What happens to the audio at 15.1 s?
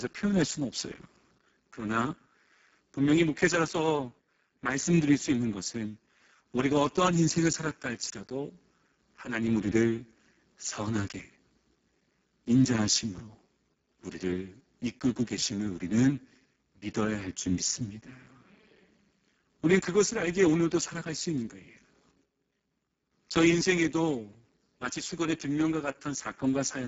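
At 15.1 s you're hearing the Speex codec damage that runs through the whole clip, not a one-off event. Speex is a CELP speech codec, and here it's starved of bits for the excitation signal, so the speech comes out hoarse, grainy and edging toward robotic. That fits a very low setting of roughly 6 kbps. Nothing is left above 7.7 kHz, and the top band sounds more like shaped noise than real detail.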